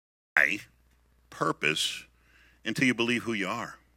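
A cut-off start runs from 0.00 to 0.37 s in this speech clip: the opening is pure digital silence, and at 0.37 s the speech jumps in mid-sound with no natural attack, because capture or streaming began late and missed the onset.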